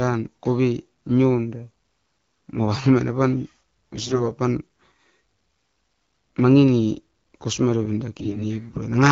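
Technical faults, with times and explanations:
3.95–4.31 s and 8.18–8.45 s, AMR bit errors: hoarse, gargly bursts as roughly 7 and 10 percent flipped bits misplace excitation pulses and skew gain and spectrum values.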